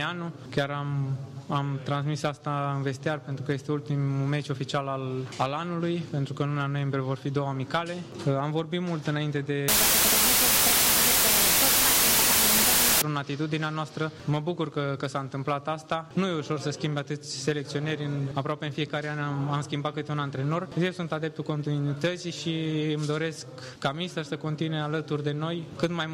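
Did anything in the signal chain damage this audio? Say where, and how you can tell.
Yes. From 9.68 to 13.02 s the audio suffers a wrong sample width at the sample-format conversion stage: 16-bit data are read as packed 24-bit samples. Each value straddles mismatched bytes, so only some carry the true top bits, and the sound plays at 1.5 times speed and pitch, buried under loud broadband noise. A spectrogram shows a bright, full-band noise wash over faint, upward-shifted traces. The waveform jumps to loud, dense hash for that span.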